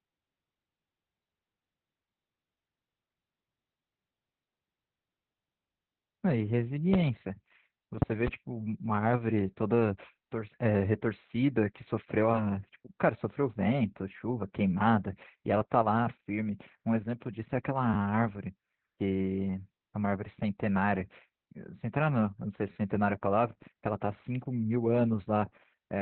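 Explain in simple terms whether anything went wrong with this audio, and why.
Two things went wrong.

The whole recording has Opus voice compression damage, applied heavily. The speech sounds muffled, hoarse and a little robotic, because the codec squeezed it into a narrow telephone-like band with nothing above about 4.2 kHz and described the voice only roughly. It differs from a simple muffling filter because the roughness and robotic edge are there as well as the dullness, and they last from start to finish.

There are also two repeated buffer faults. At 17.94 to 17.96 s a tiny slice of sound, about 12 ms long, plays twice more, and at 22.72 to 22.76 s the same happens three more times. Each is heard as a brief buzzy stutter with hard joins, which fits a 512-sample buffer being replayed when fresh audio arrived late. Unlike a dropout, no sound goes missing. The same piece simply repeats.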